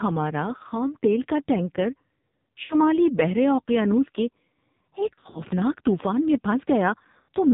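Throughout, the speech sounds buzzy, thin and synthetic, with nothing above 4 kHz. That is heavy AMR narrowband mobile codec damage: the signal is squeezed into 8 kHz sampling and rebuilt from a vocal tract model driven by sparse pulses. The coarseness fits a low mode near 5.9 kbps.

At 2.64 to 2.76 s, 5.14 to 5.42 s and 7.22 to 7.30 s, the sound briefly smears, warbles and dips before recovering roughly. These are lost AMR speech frames. At 2.64 s and 7.22 s about 60 ms goes missing, consistent with three 20 ms frames. At 5.14 s about 120 ms is lost in short gaps scattered over roughly 200 ms, the longest about 40 ms. The decoder covered each gap by repeating the last good pitch and vocal tract settings at falling gain.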